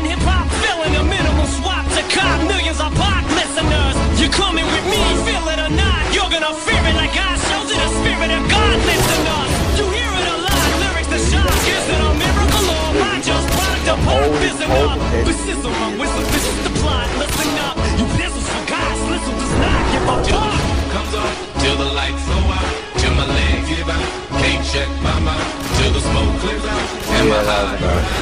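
No technical faults occur at any point in the audio, so there is nothing to describe in time order.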